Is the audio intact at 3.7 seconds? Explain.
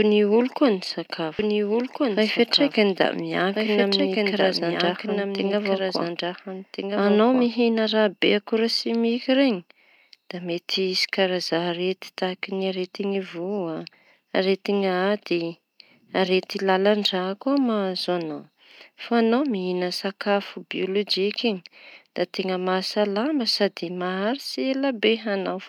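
No. At 3.7 seconds the clip is inside a doubled audio track that runs from 1.39 s to 7.47 s. A second, full-band copy of the speech sits roughly one and a half seconds behind the original and around 5 dB quieter, so two out-of-step layers overlap. The trailing copy carries no decay or room colour and begins and ends abruptly. The likely cause is a slower second capture path or an edit that kept two offset copies.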